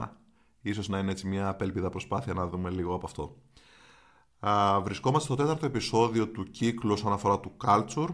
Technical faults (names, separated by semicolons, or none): none